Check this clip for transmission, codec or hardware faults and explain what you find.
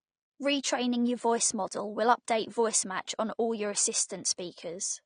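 One fault runs through the whole clip: the speech sounds dull and smeared, with nothing above 9.7 kHz and a fizzy, warbling texture on sibilants. This is likely AAC compression at a low bitrate, fitting roughly 32 kbps AAC-LC, where scarce bits force the encoder to drop the top band and coarsely quantise what remains.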